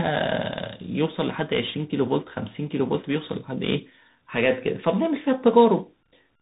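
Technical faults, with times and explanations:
Throughout: tandem speech coding. The speech sounds rough and noisy in a way that fits two CVSD stages with a G.711 A-law link between them. Each coder re-encodes the already degraded output of the previous one, so granular hiss and slope-overload smearing build up. On a spectrogram, energy stops sharply at about 3.8 kHz and the harmonics look blurred and grainy. On the waveform, steep transients appear rounded and the quiet stretches carry a fizzy noise floor.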